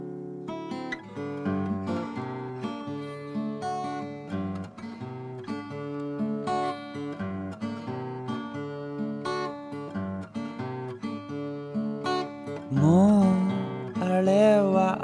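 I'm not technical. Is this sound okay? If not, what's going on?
Yes, nothing wrong turned up anywhere in this one.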